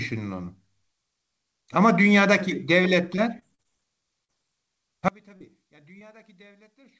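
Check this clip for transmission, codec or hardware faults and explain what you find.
Three kinds of fault stand out: a burst of repeated packet loss, three short concealed losses, and a sudden collapse in level near the end. The band tops out at 8 kHz throughout, which fits a G.722 call path.

Repeated packet loss (robotic sound), 3.16 to 3.67 s: four gaps totalling about 100 ms, the longest 33 ms, were patched by extending the preceding sound. About 17% of that half-second is synthetic, giving a choppy stretch with pieces missing. Unlike a single loss, the patches cluster closely.

Short concealed packet loss, at 4.25 to 4.31 s, 5.37 to 5.42 s and 5.98 to 6.02 s: about 40, 40 and 20 ms never arrived in time and were filled by continuing the last sound, then blended back. Each is heard as an isolated brief smear or wobble, not a sustained robotic run.

One channel inverted, from 5.08 s to the end: the level drops by about 31 dB in a mono listen. 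A reversed-polarity channel is the likely cause, making the shared centre content cancel when both sides are summed. What tells it apart from a dropout is the faint residue that remains instead of silence.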